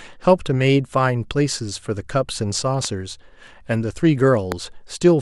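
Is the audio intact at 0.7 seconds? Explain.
Yes, the audio is intact at 0.7 seconds, with no audible fault at that point.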